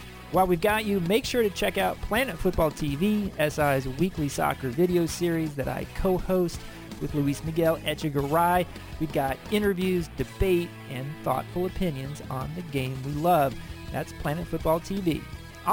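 Throughout the clip there is imaging from sample-and-hold upsampling: the rate was doubled by repeating samples without filtering, which fits a 24 kHz source. A mirrored spectrum fills 12 to 24 kHz at about -25 dB, a bright metallic fizz following the sound's level.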